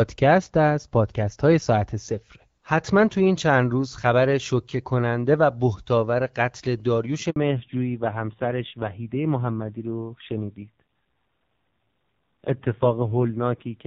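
At 7.30 s the audio cuts out in a handover gap. The call is being passed from one network link to another, and no speech frames get through during the switch. The sound dies away quickly and stays silent for 60 ms, until 7.36 s. Anything spoken in that window is simply gone. It is not muffled or smeared. It is missing, and the speech resumes on the far side of the hole.

Right after, from 7.36 s to the end, comes a fallback to narrowband. Before the gap, the speech carries the crisp upper band of wideband HD Voice, consistent with AMR-WB at about 12.65 kbit/s. After it, nothing above 4 kHz remains. Sibilants lose their edge and the voice turns dull and boxy. A rough, grainy texture appears too, which fits a low-rate narrowband codec around 5.9 kbit/s.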